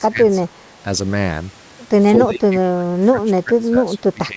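An echo canceller, likely confused by double talk and unable to tell the near talker from loudspeaker echo, turned the speech down with it. This speech suppressed in double talk sinks about 20 dB from 0 to 0.6 s, then about 25 dB from 2.18 s to the end.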